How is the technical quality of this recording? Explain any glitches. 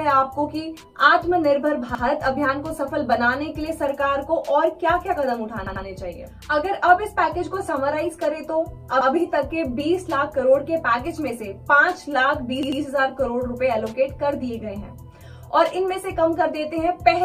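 The recording has four stutters caused by a repeated buffer, at 1.95–2.04 s, 5.67–5.85 s, 9.01–9.10 s and 12.63–12.82 s. When new audio arrived late, the device replayed its last 93 ms block, which fits a 4096-sample buffer. That block plays once more in the first and third events and twice more in the second and fourth. Each repeat is heard as a quick double or triple stutter with a hard seam, and no audio appears to be skipped afterwards. In a waveform, a 93 ms stretch repeats exactly, with abrupt steps at each join. A spectrogram shows the same pattern copied side by side, with thin vertical lines at the seams.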